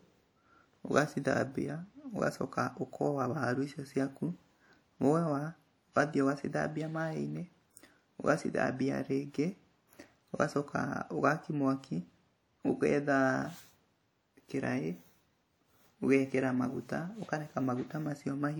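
From start to finish the speech carries plainly audible transform-codec damage, most likely WMA compression. The sound rings and turns washy, and a hiss rises and falls with the signal. Long transform blocks smear quantisation noise over tens of milliseconds around each sound. The damage points to a low bitrate, around 48 kbps, where weak spectral lines are zeroed. Content still reaches about 20.1 kHz.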